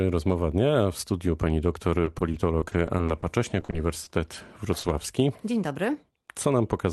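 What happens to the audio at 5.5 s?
Nothing goes wrong at 5.5 s: the speech carries on intact through the call path, with only the band-limiting expected of a call codec capped around 12 kHz.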